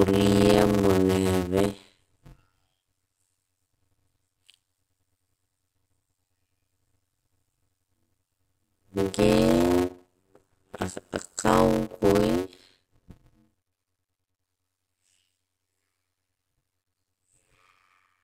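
From start to end, a block size mismatch (padded) leaves a short silent gap in every block, heard as a buzz of about 92 Hz. The speech runs at 0.533 times normal speed, which fits 256-sample blocks padded with zeros. Unlike slowed playback, the timbre stays normal.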